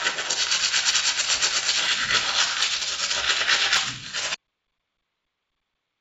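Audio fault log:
1.21–1.25 s, short concealed packet loss: about 20 ms of audio never arrived, and the receiver bridged the gap by extending the preceding sound for 23 ms before blending back. It is heard as a brief smear. A spectrogram shows a short stretch of smoothed, repeated texture. The waveform shows a slightly too-regular patch.
4.35 s to the end, audio dropout to silence: the sound cuts off abruptly and does not return. The input was likely lost, with silence written from then on. The waveform drops to a flat line, and the spectrogram goes completely blank, with no residual noise floor, even below the 8 kHz band limit.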